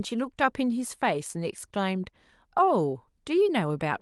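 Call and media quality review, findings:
No faults found: the speech arrives intact over the call path, with its top end stopping around 12 kHz, which fits an Opus link set to that bandwidth.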